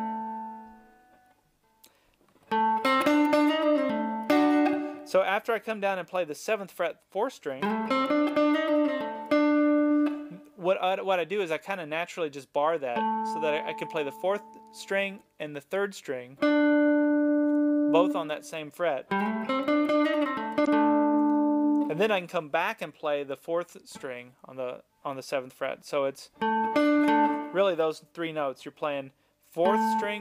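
Damaged data in a compressed stream appears at 20.63 to 20.68 s: corrupted bytes make the decoder misread those frames and lose sync until it finds the next valid frame header, leaving a brief glitch lasting about 56 ms in the sound.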